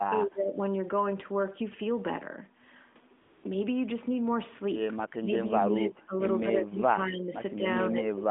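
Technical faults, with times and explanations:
0.0–0.59 s, speech suppressed in double talk: right from the start the voice sinks by roughly 20 dB in patches, and about half a second of it ends up ducked or broken. The likely cause is the far end talking over it. The echo canceller couldn't tell this talker from its own loudspeaker echo, so it turned everything down.
3.22–3.44 s, AMR comfort noise: the phone decided the talker had gone quiet and stopped sending speech frames for 220 ms. The receiver filled that gap with generated noise built from a rough sketch of the background's level and spectrum. You hear the real background swap out for a smoother, steadier hiss, then switch back.
5.19–8.3 s, speech suppressed in double talk: the same ducking returns and runs to the end, adding up to around a second and a half of dips, thinned-out stretches and dropouts, again reaching roughly 20 dB down. 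It likely comes from both sides speaking at once, with the canceller clamping down on this voice while the other side is active.
5.76–5.83 s, echo leak: a short, faint scrap of the voice comes back 207 ms late, about 20 dB under the direct speech. It's likely the loudspeaker side's canceller letting a bit of its microphone pickup slip through, which then got sent back down the line. The rest of the path sounds like ordinary narrowband mobile audio from the AMR codec, with nothing above 4 kHz.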